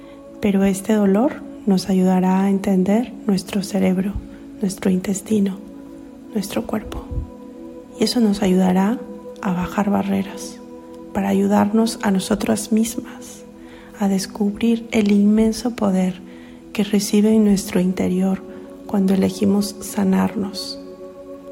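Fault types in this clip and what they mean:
Nothing stood out on listening.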